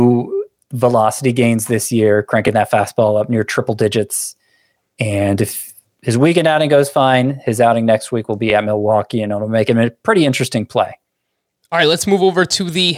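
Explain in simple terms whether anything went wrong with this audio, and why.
Overlapping chunks show up as a short stutter in the speech at 2.48, 5.49, 8.50 and 11.51 seconds. The audio was handled in pieces about 3 seconds long, and each new piece began slightly before the previous one finished. So at every join, a sliver of about 12 ms of sound plays twice. That is too brief to hear as an echo, so it comes across as a small click or hiccup repeating every 3 seconds.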